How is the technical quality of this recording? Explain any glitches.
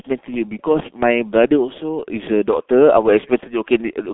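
Quality is poor, with heavy codec damage. Throughout, the speech bears the G.723.1 codec's mark: a 0.2 to 3.5 kHz band, nothing above 3.8 kHz, coarse frame-by-frame modelling. It sounds muffled, hoarse, with smeared consonants, consistent with about 6.3 kbit/s.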